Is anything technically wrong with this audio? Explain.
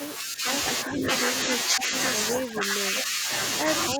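Yes. The speech dips in level at 0.18 to 0.45 s, 0.88 to 1.04 s, 1.67 to 1.93 s and 2.44 to 3.3 s, and from 3.9 s to the end, by a few dB at first, deepening to roughly 20 dB. This is speech suppressed in double talk: the echo canceller likely mistook overlapping far-end speech for echo and attenuated the talker.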